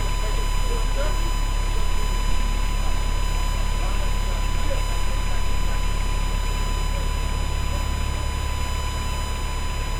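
A steady USB whine runs throughout, fixed at 1 kHz. Current drawn in 1 ms USB frames leaks through power or ground, sitting roughly 15 dB below the sound.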